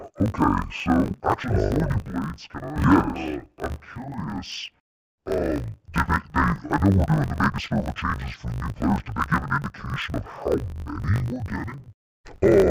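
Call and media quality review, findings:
Speech dull, robotic, an octave low, with a steady 50 Hz buzz, throughout. Probable component: deinterleave in capture or decode. Interleaved audio read as planar in 20 ms blocks; each channel plays half-speed, halves overlapping, so pacing holds.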